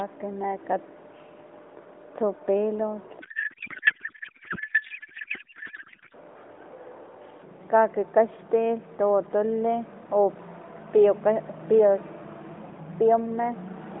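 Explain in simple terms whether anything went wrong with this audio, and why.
From 3.2 to 6.1 seconds, the speech turns into garbled, warbling noise that barely follows it. This is a codec payload misread: the phone-style AMR narrowband codec packed its data one way, and the receiving end unpacked it in a different layout, scrambling every frame until both sides matched again.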